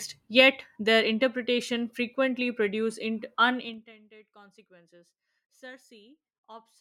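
From 3.58 to 3.93 s a rapid ticking, like a zipper being pulled, rides over the speech as its level falls by roughly 25 dB. This is zipper noise: the gain drops in unsmoothed 3 dB steps, around twenty per second, and each abrupt jump clicks.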